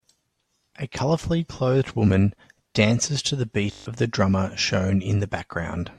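Speech, with a system hang loop from 3.72 to 3.86 s: the driver stalled while the hardware replayed one 20 ms buffer seven times, giving a steady 50 Hz buzz and losing roughly 150 ms. Unlike a dropout, the gap holds exact repeats, not silence.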